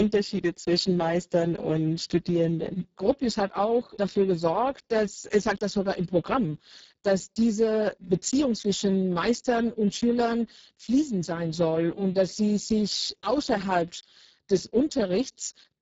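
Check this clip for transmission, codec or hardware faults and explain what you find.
The speech carries Speex codec damage from start to finish, and it's heavy. The bitrate sounds like roughly 6 kbps, so the excitation is starved of bits and the voice comes out hoarse and noisy. Nothing reaches above about 7.7 kHz.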